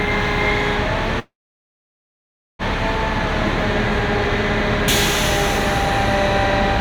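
A recording of sounds with a call audio freeze from 1.19 to 2.62 s: about 1.4 s filled, mostly silent, then resuming intact, likely packets stalling and draining the jitter buffer.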